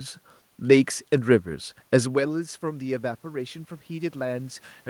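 From 1.47 s to the end, automatic gain rising lifts the level slowly after the input drops about 14 dB; unlike the talker moving near 2 s, room noise swells too.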